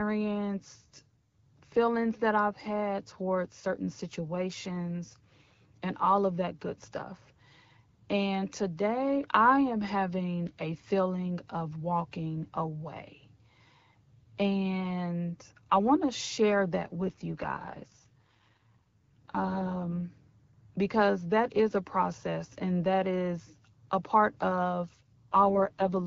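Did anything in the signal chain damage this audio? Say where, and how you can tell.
Yes. From 17.00 to 20.03 s and again from 24.93 to 26.04 s, the speech turns rough and raspy with no gap or band loss. This is an AMR rate drop at the network stage. The texture fits AMR-WB falling from 12.65 to 6.6 kbit/s, trading speech detail for error protection.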